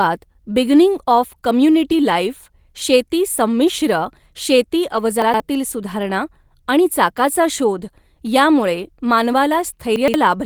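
Speech with two kinds of transmission fault. Three brief stretches sound like a lost packet rebuilt from error correction: 1.99 to 2.01 s, 4.92 to 4.98 s, and 8.62 to 8.64 s. Each is about 20 ms of audio, or about 40 ms in the middle one, which fits a single lost packet and then two. The next packet carried a low-bitrate backup copy, so the decoder filled the hole with a coarser, noisier version of the same speech instead of leaving silence. What separates this from a plain dropout or a concealment guess is that there is no gap, no fade and no smeared repetition, only a moment of rougher texture. Twice the speech stutters from chunks out of order, at 5.22 to 5.40 s and again at 9.96 to 10.14 s. In each case one block of about 60 ms was written two blocks late, so it plays after the two that should have followed it. Nothing is missing and nothing is repeated, which separates this from a dropout or a buffer repeat. 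Instead the sound is briefly jumbled, with three hard joins where the reordered blocks meet.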